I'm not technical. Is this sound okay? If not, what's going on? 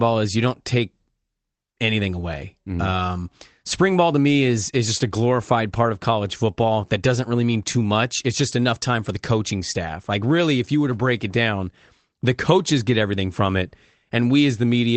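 Yes, the sound is technically fine, with no glitches, dropouts or distortion, and it has the slightly narrow quality of an online call, since the call connection keeps the sound only up to about 8 kHz.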